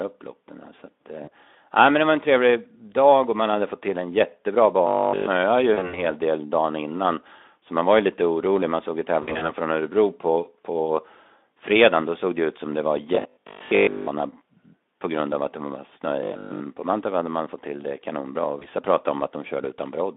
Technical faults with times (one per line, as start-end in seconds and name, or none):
1.23-1.30 VoIP packet loss concealed by the speech codec
4.87-5.27 robotic sound from repeated short buffers
5.73-6.03 VoIP packet loss concealed by the speech codec
9.22-9.52 VoIP packet loss concealed by the speech codec
13.15-14.07 robotic sound from repeated short buffers
16.23-16.61 robotic sound from repeated short buffers
18.59-18.68 VoIP packet loss concealed by the speech codec